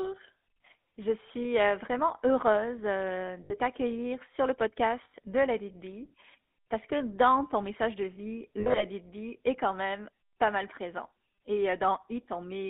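Throughout, the GSM full-rate codec, consistent with 13 kbps, rebuilds speech from a vocal-tract model and pulse excitation, giving a plainly buzzy, gravelly sound confined to 250 Hz–3.5 kHz. Lost GSM frames follow, with the decoder repeating the last good frame at falling level. From 3.44 to 3.55 s, after "euh vraiment heureuse euh", about 60 ms is lost. From 5.04 to 5.15 s, after "t'accueillir sur le", about 100 ms is lost. From 8.6 to 8.85 s, after "ton message de vie", 120 ms is lost in scattered gaps, the longest about 70 ms. Each loss is heard as a brief rough, metallic ring.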